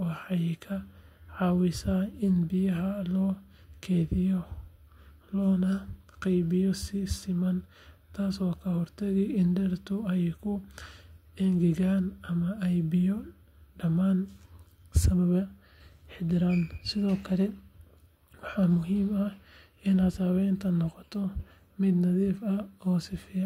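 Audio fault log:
15.13–16.88 s, block size mismatch (truncated): speech picks up a rough buzz at 46.9 Hz, which fits 1024-sample blocks at 48 kHz. Each block's tail is discarded, so the waveform jumps abruptly every 21 ms, and the spectrogram shows evenly spaced vertical striations with a 47 Hz harmonic comb. The next stage reads almost as much as is written, so the speech keeps its speed (1.0x) and its pitch.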